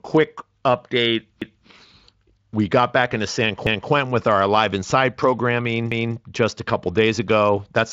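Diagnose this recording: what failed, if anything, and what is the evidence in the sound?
Overlapping chunks at the buffering or chunked-processing stage cause stutters at 1.42–1.67 s, 3.67–3.92 s (just before "with our") and 5.92–6.17 s. Each replays about 250 ms of speech, and they recur every 2.25 s. Each new chunk starts a quarter-second before the previous one ended, so the join repeats audio. A dropout or jitter-buffer gap would lose material instead. Here nothing is missing, the spacing is exact, and the Speex band limit near 7.6 kHz stays unaffected.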